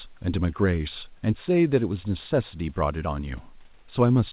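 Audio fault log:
No faults to log.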